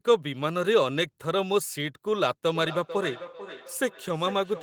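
From 2.55 s to the end of the clip, the speech picks up a feedback echo between two devices: a second device in the room replays the call, and this microphone captures it again, beyond the reach of its own echo canceller. Each phrase returns roughly every 0.4 s, thinner and more ringing, peaking about 14 dB below the speech. A spectrogram shows faint, thinned copies of each syllable trailing at that spacing; the waveform shows small repeated bursts.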